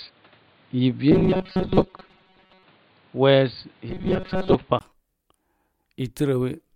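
From the start to 4.81 s the speech is band-limited, with a new noise floor roughly 35 dB below the signal. It sounds dull and boxy, then clears after a 20 ms gap, with level roughly unchanged. This is likely an input switched to a poorer device. Between 1.12 and 2.63 s, and again from 3.90 to 4.55 s, the speech turns into a rigid metallic buzz at 188 Hz. This is robotic sound from repeated short buffers, likely caused by about 5.3 ms of audio being looped while most of the real signal is skipped.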